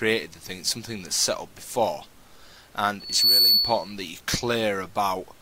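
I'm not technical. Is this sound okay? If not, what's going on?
No. From 2.99 to 3.93 s there is loudspeaker feedback squeal: the microphone hears its own speaker, and a 4.4 kHz tone swells up within about a third of a second into a piercing whistle.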